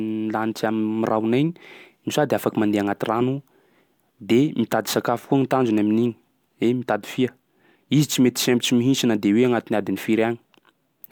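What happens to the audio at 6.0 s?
Nothing goes wrong at 6.0 s; the speech carries on cleanly through that moment with no dropout, click, distortion or other audible fault.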